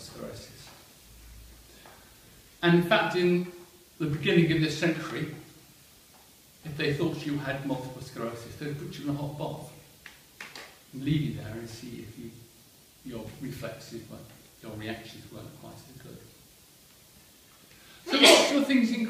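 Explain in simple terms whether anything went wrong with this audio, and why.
Nothing went wrong; no faults can be heard anywhere.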